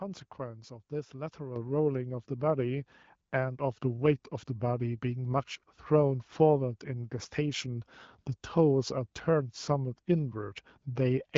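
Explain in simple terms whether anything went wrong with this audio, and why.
At about 1.56 seconds the call software decided the microphone was too quiet and turned its input volume up in a single jump, a microphone volume stepped up fault. Because the change happens at the microphone itself, the talker and the room noise behind them get noticeably louder together, all at once. The HD Voice (AMR wideband) compression on the line leaves only light traces of its own.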